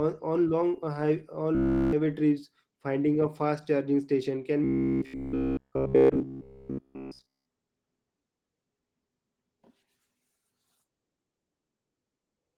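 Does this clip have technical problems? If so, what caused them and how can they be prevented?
Yes. The whole clip has Opus voice compression at 16 kbps in hybrid mode, so the speech sounds muffled and a bit hoarse from coarse coding. Giving the encoder a higher bitrate would prevent that.

The robotic sound from repeated short buffers shows up at 1.55–1.93 s and 4.64–7.46 s. It's a rigid, metallic 66.8 Hz buzz that follows the speech only roughly, likely from a buffer of about 15 ms being replayed while the fresh audio is skipped. Keeping the audio feed reliably ahead of playback, for example with a larger buffer, would prevent it.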